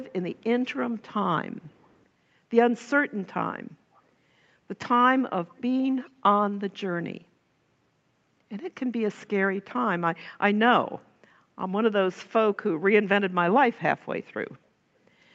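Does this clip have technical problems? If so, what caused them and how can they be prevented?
Yes: faint echo leak at 1.62–2.03 s, 3.94–4.02 s and 5.56–5.62 s, a copy of the speech delayed about 0.29–0.31 s, showing as weak repeated spectrogram patterns. This is likely the far end's echo canceller letting its loudspeaker pickup through; headphones or better echo cancellation there would prevent it.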